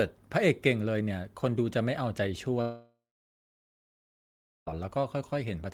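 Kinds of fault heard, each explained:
Long network dropout: at 2.61 s the speech decays into a fading buzz, then about 1.7 s of near silence, resuming at 4.76 s with about 2 s of audio gone, likely a stalled stream. Unlike a brief packet-loss click, this gap spans seconds.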